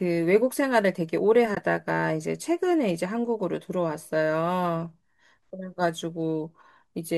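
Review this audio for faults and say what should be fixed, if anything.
Two AAC frames were dropped at 1.55 to 1.57 s and the decoder muted them. This AAC frame loss with muting leaves a brief 20 ms gap that fades out and back in. The light coloration from the low-delay codec, likely AAC-ELD, is not a fault. Adding packet redundancy or forward error correction, with concealment that fills lost frames instead of zeroing them, would prevent the gap.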